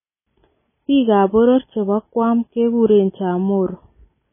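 Throughout, the speech sounds watery and swirly, with smeared consonant attacks and nothing above 3.5 kHz. This is likely heavy MP3 compression at a starved bitrate, fitting roughly 16 kbps: the encoder cuts the treble and drops weak frequency lines that flicker between frames.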